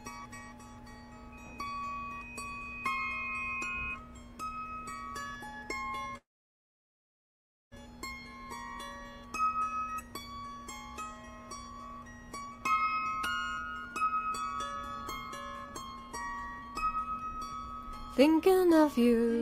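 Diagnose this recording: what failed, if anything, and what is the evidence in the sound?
A call audio freeze runs from 6.17 to 7.74 s. The sound buzzes briefly, then falls silent. Likely network delay emptied the jitter buffer, inserting a gap.

A jitter buffer speed-up runs from 12.41 to 19.37 s. The sound plays at 122% speed with unchanged pitch. The buffer trimmed pitch periods, shedding about 1.5 s.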